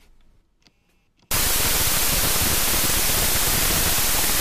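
From 1.31 s to the end at 4.40 s, the audio turns into loud, harsh noise with the original sound faintly buried inside it, running at half speed, an octave low. This is a wrong sample width fault: data stored as 32-bit floats are being read as 16-bit integers. Each four-byte value becomes two unrelated samples, so most come out as noise, only some keep the signal's upper bits, and twice the samples stretch playback to half speed.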